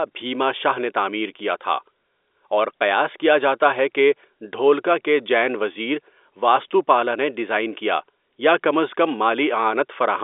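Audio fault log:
No faults; telephone-band speech, nothing above 3.8 kHz.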